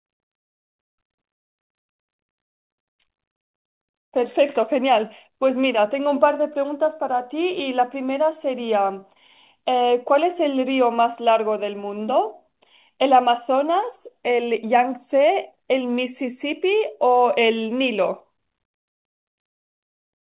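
Speech over a WebRTC call path with nothing above 4 kHz, consistent with a G.711 mu-law telephone codec at 64 kbps, and no technical faults.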